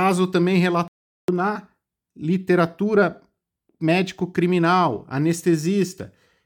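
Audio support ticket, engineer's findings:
Playback stall, 0.88 to 1.28 s: speech cuts to silence for about 404 ms, resumes at "na literatura". Likely player buffer underrun or blocked playback thread.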